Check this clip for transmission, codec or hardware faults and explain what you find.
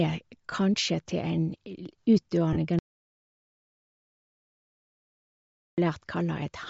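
Three kinds of fault are audible in the speech.

Bluetooth LC3 compression runs through the whole clip. The transmission path likely used LC3, the LE Audio transform codec, at a rate that sounds like about 32 kbps with 10 ms frames. At that rate the encoder discards much of the upper spectrum and the decoder fills it with noise, so the voice carries a plainly audible breathy, grainy edge.

Lost LE Audio frames occur twice. Near 0.51 s about 10 ms of audio fails to arrive, and from 2.53 to 2.57 s roughly 30 ms goes missing, which fits one frame and then three consecutive frames. The LC3 decoder conceals each gap by repeating the last spectrum with randomised phase signs. Each gap briefly replaces the voice with a noisy, smeared texture.

An audio dropout to silence runs from 2.79 to 5.78 s, about 3 s. Output falls to silence: the voice stops abruptly and then resumes mid-flow, with no room tone or noise floor in between. 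The likely cause is a lost input or link while the recorder kept writing silence. Anything spoken during that stretch is gone.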